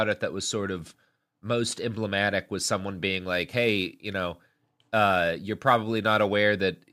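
Sample clock jitter runs from 3.20 s to 6.25 s in this speech clip. The converter's timing wanders by a few microseconds, so each sample lands slightly off its proper instant, and the resulting error scales with how steeply the waveform is changing. It comes through as a grainy hiss riding on the speech, around 30 dB below it, strongest on loud and bright sounds and disappearing in the pauses.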